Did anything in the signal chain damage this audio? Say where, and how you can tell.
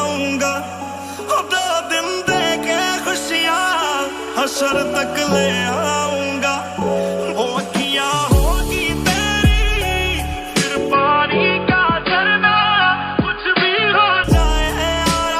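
Yes. From 10.93 to 14.24 s the sound loses everything above 4.8 kHz and turns boxy, with a faint new background hiss but no gap or level jump. This is likely an input switched to a poorer device at the driver stage. The added noise floor and changed tone separate it from a codec simply narrowing bandwidth.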